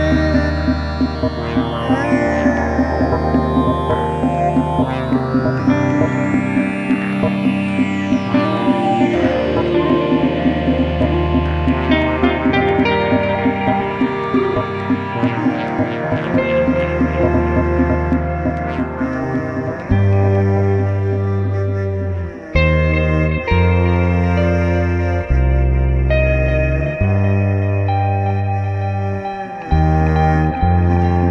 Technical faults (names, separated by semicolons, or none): none